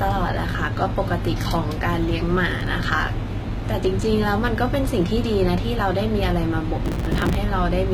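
Low-bitrate audio saved at a high bitrate runs throughout: the speech has nothing above 14.9 kHz. The likely cause is a low-bitrate first encoding re-saved as a much larger MP3, which cannot bring back detail the first encoder removed.

Processor overload crackle occurs at 2.37 to 2.67 s and 6.85 to 7.36 s. Buffers of roughly 3 ms miss their deadlines and are skipped, leaving hard-edged gaps. The first burst is a short gritty tear from a handful of misses; the second, around a hundred, is denser and longer.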